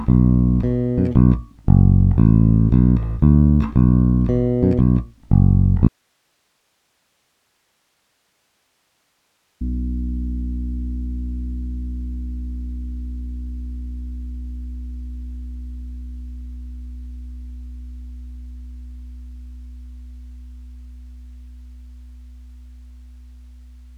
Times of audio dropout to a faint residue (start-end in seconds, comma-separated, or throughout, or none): 5.88-9.61